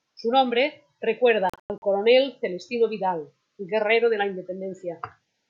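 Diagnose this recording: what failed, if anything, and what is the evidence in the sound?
Bluetooth dropout on the wireless playback link, 1.50–1.82 s: several silent gaps totalling about 200 ms, longest 102 ms, likely lost packets. The spectrogram shows blank vertical bands.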